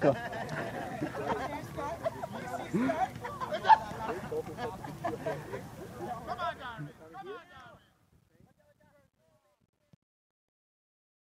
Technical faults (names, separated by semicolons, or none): truncation distortion on a fade